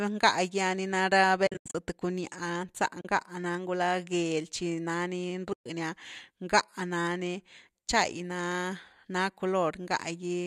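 From 1.47 to 1.75 s, AAC frame loss with muting breaks the speech into several soft gaps, about 210 ms lost across 280 ms, the longest run about a tenth of a second. Further holes follow at 3.01 to 3.05 s (40 ms) and 5.53 to 5.66 s (130 ms). The gap lengths fit 10 ms frames, likely from low-delay AAC, with each missing frame decoded as silence. The overlapping windows fade the sound out and back in, so the edges are smooth. That sets these apart from hard sample dropouts, which click, and from concealment, which fills the hole with repeated sound.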